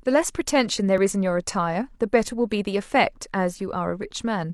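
At about 0.98 s, an overlap between stream segments occurs: two adjoining segments claim the same stretch of time, and the player trims the shared part from audio that was never duplicated. Roughly 33 ms of speech vanishes, ending at 1.01 s, and the waveform jumps, producing a tiny skip.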